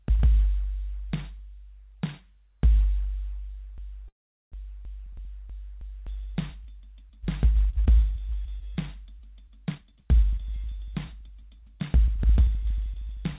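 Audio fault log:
3.78 to 6.07 s, broken-record loop: a fragment of about 0.32 s repeats exactly, six times back to back, likely because the stream stalled and kept resending its last piece. Unlike a freeze, the material that belonged here never plays and is lost.
4.08 to 4.54 s, call audio freeze: inside the loop, the last sound is stretched into a fading buzz that drops to silence for about 0.4 s, likely from packets held up until the jitter buffer ran dry. The audio then resumes where it stopped, adding a gap of about 0.44 s but losing nothing.
9.72 to 13.33 s, jitter buffer speed-up: the sound runs about 9% fast at unchanged pitch, as the buffer trims many short pitch-period slices, roughly 0.3 s in all, to shed excess delay. Unlike a loop or freeze, nothing repeats or stops; it simply hurries.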